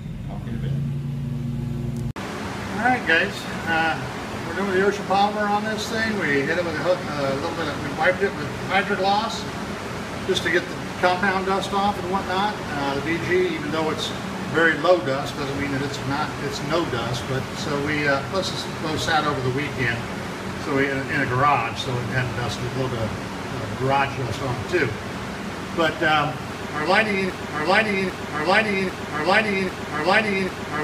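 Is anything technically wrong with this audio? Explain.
Yes. From 27.30 s to the end of the clip, a broken-record loop takes over: a fragment about 0.80 s long repeats exactly, back to back, four times, with no variation between passes. Whatever should have followed after 27.30 s never arrives. The likely cause is a stall in the player, encoder or stream, which kept re-sending the last fragment in its buffer instead of new audio.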